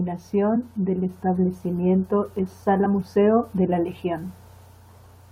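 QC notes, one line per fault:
0.55–0.57 s, damaged data in a compressed stream: a brief glitch just before "del establecimiento es". Some of the coded speech here is corrupt, so the decoder misreads the frame, loses its place and hunts for the next valid frame header. The garbled frame comes out as a glitch lasting about 20 ms.
2.85–2.87 s, damaged data in a compressed stream: the same kind of short glitch right after "del establecimiento es", again about 20 ms. Bad bytes in this stretch of the compressed stream break frame sync. The decoder turns nonsense frame data into a glitch before it locks onto the next intact frame.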